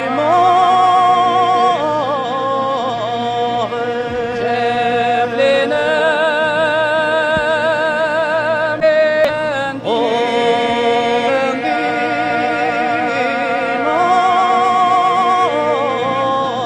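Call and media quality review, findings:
Short glitch bursts, about 35 to 55 ms each, at 5.95, 8.78, 9.25, 11.24 and 12.96 s. Damaged data in a compressed stream: corrupt bytes make the decoder misread frames and lose sync until it finds the next valid frame header.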